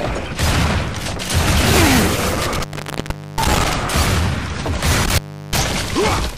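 Around 2.28 to 3.73 s there's an intermittent contact: a loose plug or cable opens for about 0.74 s, so the sound drops to faint hiss with crackle at each edge. It happens again from 5.04 to 5.59 s, opening for about 0.35 s.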